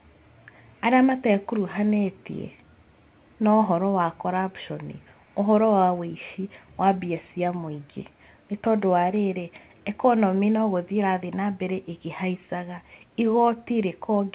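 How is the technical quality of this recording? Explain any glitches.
Nothing stood out on listening: the speech comes through a narrowband call line with nothing above 4 kHz, and no glitch could be heard anywhere in it.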